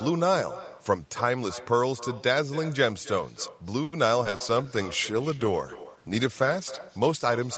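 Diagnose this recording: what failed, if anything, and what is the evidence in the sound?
Echo with no canceller, a call-processing failure at the far end, runs through the whole speech recording. Every phrase is followed roughly 300 ms later by a copy about 16 dB quieter and thinner. The far side's loudspeaker fed its microphone, and no echo canceller removed it, so the voice returned after the network round trip. On a spectrogram, each syllable has a faint duplicate offset to the right. The waveform shows small trailing envelopes after each burst.

Repeated packet loss, which gives a robotic sound, is a network fault between 3.83 and 4.43 s. There are four gaps, the longest about 90 ms, and concealment covers 28% of that stretch. Each hole is filled by extending the last sound, so the voice turns choppy with pieces missing. On a spectrogram, harmonics freeze into flat, smeared bands and then break off. 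The waveform shows repeated, overly regular cycles where content should change.

A call bitrate drop at the codec stage starts at 4.35 s and lasts to the end. The sound points to Opus being pushed from around 48 kbps down to roughly 13 kbps, with the lowest rate held for about 2.9 s. Coarser coding makes the voice rough and watery, and the top end dulls. On a spectrogram, energy thins out and fills in less above a lowered ceiling, below the 8 kHz band edge carried earlier.

Jitter buffer slow-down, a receive-buffer fault, runs from 4.54 to 4.84 s. Playback slows to about 88% speed at unchanged pitch, because about 48 ms was added by repeating single pitch periods to rebuild the reserve. Sounds are drawn out. On a waveform, near-identical periods sit back to back. On a spectrogram, formant tracks stretch horizontally, but harmonic spacing stays the same.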